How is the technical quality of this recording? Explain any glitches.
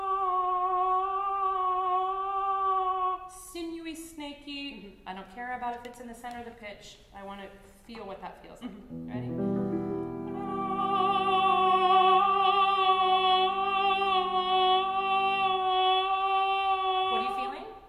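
No glitches or technical faults can be heard here.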